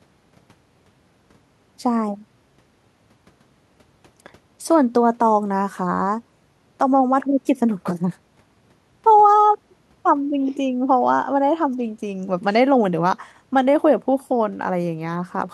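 A speech recording with no technical faults to report. The room's own background noise can be heard, about 42 dB below the speech, and it belongs to the recording rather than to any problem in the system.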